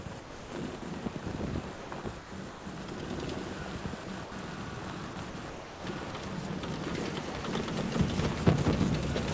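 A block size mismatch (truncated) runs through the whole clip. The end of each block is discarded, giving a 100 Hz buzz, and the audio plays 1.09 times fast with its timbre unchanged.

From 0.04 to 0.82 s, 1.76 to 2.66 s, 4.04 to 4.32 s and 5.14 to 5.84 s, the sound is chopped by the voice detector. Parts of the sound drop into comfort noise, about 400, 480, 120 and 400 ms of it. A voice activity detector switching repeatedly is the likely cause.

At 6.12 s, sound is dropped by the voice detector. About 20 ms gives way to steady comfort noise before the sound returns, likely because the detector briefly took the sound for background.

Throughout, the call codec passes nothing above 8 kHz, which fits wideband G.722.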